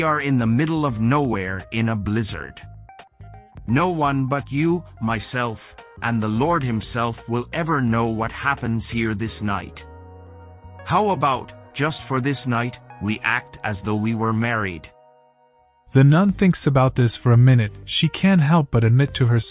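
No technical faults are audible anywhere in the audio.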